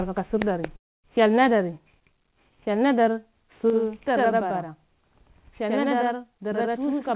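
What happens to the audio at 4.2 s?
At 4.2 s the sound is doubled by a channel delay (doubling) that runs from 3.7 s to the end. One channel lags by about 93 ms, which fits a 4096-sample buffer, and the mono sum plays both. Unlike reverb, it is a single equal-level slap with no decaying tail.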